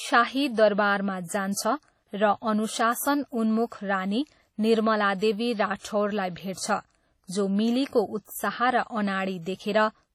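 Throughout the speech there is a washy, ringing texture with hiss that swells and fades with the signal, and nothing above 17 kHz. This is likely heavy WMA compression, consistent with roughly 32 kbps, where long transform blocks smear quantisation noise and weak components drop out.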